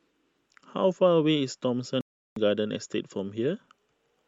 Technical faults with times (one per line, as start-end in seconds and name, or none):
2.01-2.37 Bluetooth stall